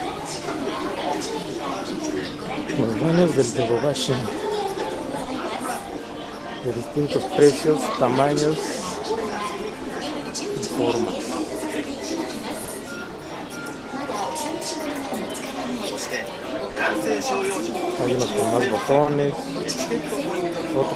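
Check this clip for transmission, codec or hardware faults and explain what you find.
Three related timing faults show up here, all tied to the two ends running on different clocks.

Clock drift between sender and receiver runs through the whole clip. The sender's clock is slow by roughly one and a half percent, so audio arrives a little slower than the receiver plays it out. The jitter buffer keeps draining, and the receiver has to keep patching that shortfall. You hear it only indirectly, as the hiccups and slight tempo wobble described below.

Repeated timing corrections come in two stretches, 0.06 to 4.2 s and 7.89 to 12.24 s. To keep the buffer from running dry, the receiver plays at about 99% speed, repeating small slices and stretching each stretch by around 70 ms in total. The edits all push the same way but land unevenly, and they come through, if at all, as slight hiccups or an unsteady tempo.

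Short stalls from a late packet happen four times, at 5.24 to 5.30 s, 12.65 to 12.71 s, 16.72 to 16.78 s and 19.03 to 19.09 s. Each time a packet arrived late and the buffer ran empty, so the receiver held the last sound for 30 ms until the packet turned up. Then it carried on from the same spot, so nothing is lost. What you hear is a brief smeared hold with a slight buzz or dip.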